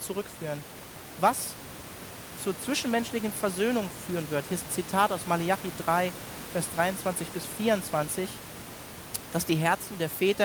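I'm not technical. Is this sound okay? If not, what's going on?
Yes, this speech recording has no technical faults. There is a little background noise from the room, well below the speech, and that is simply part of where it was recorded.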